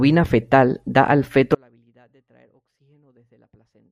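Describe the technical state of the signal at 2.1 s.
At 2.1 s the speech has gone in an audio dropout to a faint residue. From 1.55 s to the end, only a faint sound remains, roughly 40 dB down. The cause is likely a lost feed on a still-live path.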